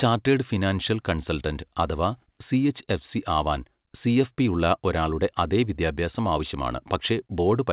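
Nothing goes wrong anywhere in this speech, which comes through an ordinary call connection whose narrow band, with nothing above 4 kHz, fits a standard G.711 phone codec doing its normal job.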